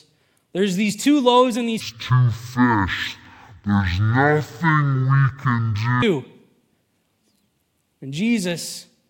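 From 1.80 to 6.02 s the speech turns slow and low. This is stereo read as mono. Left and right samples are taken in turn as one channel. Playback runs at half speed, an octave down. A faint mirrored copy sits high in the spectrum.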